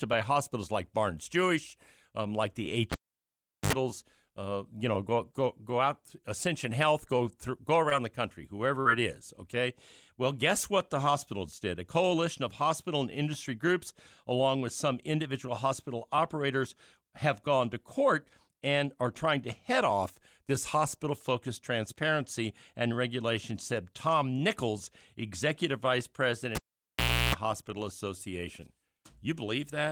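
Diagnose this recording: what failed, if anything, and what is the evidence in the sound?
Analogue wiring: a cable pulled and plugged in at 2.92–3.73 s and at 26.55–27.35 s (after "executive vice"). Each has pops, about 0.75 s of near silence and mains buzz at 50 Hz then 60 Hz. The buzz rules out a digital dropout.

Network: short concealed packet loss at 7.89 s (after "go through go"), 8.81–8.87 s (after "the country") and 11.59 s. The decoder bridged 20–40 ms holes with a brief smear instead of silence.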